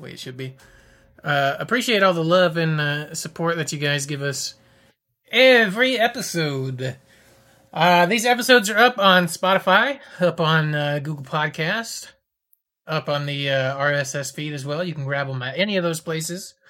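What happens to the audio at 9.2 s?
Nothing goes wrong at 9.2 s; the speech runs through that moment intact, with no dropout, glitch or distortion.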